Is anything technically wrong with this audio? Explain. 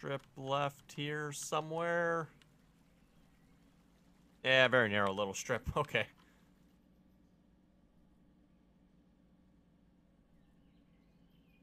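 No, nothing technically wrong stands out here; it all sounds just as it should.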